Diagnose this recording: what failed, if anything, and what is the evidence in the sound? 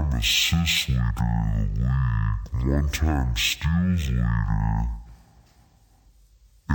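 Stereo read as mono, at sample-format conversion: interleaved channels play as one, so the speech runs throughout at half speed, an octave low, with a faint mirrored image high up, which plain slowdown lacks.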